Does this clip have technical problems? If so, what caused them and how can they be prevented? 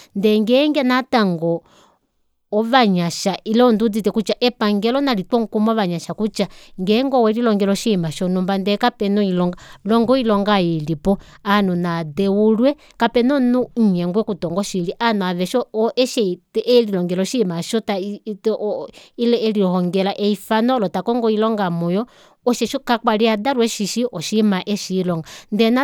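No, nothing in this speech recording stood out as a technical problem on listening, so there is nothing to trace back or prevent.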